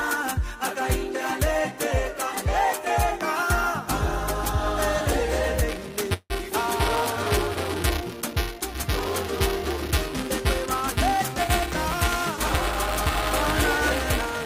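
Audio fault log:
5.69 s to the end, buffer tearing: a robotic buzz at 375 Hz, present only while sound plays. The buffer's writer and reader have slipped, so each period replays a small slice a few milliseconds old between hard joins, which fits a 128-sample buffer.
6.13 to 6.33 s, call audio freeze: the last sound is held as a fading buzz that ends in about 40 ms of silence. The audio then resumes where it stopped, nothing lost but 165 ms later, likely because delayed packets emptied the jitter buffer.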